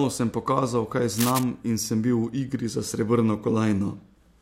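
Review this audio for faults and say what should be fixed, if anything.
Cable scratch noise runs from 1.13 to 1.44 s, between "sem pokazal kaj" and "in sem bil". It is a dense, uneven rustle sitting only a few dB below the speech. The likely cause is a worn cable or connector being moved so that its contact resistance fluctuates. Digital clicks would be sharp, isolated ticks, but these bursts are irregular and smeared together. Replace or reseat the cable and fix it in place so it cannot flex during recording.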